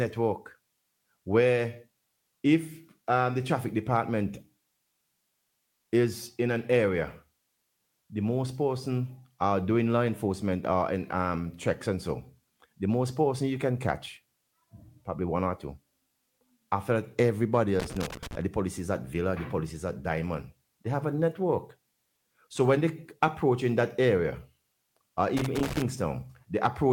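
Loose connector crackle breaks out from 17.80 to 18.35 s and again from 25.37 to 25.82 s. A worn contact keeps making and breaking. The signal is chopped into fragments. Each burst is an irregular crackle and scratch.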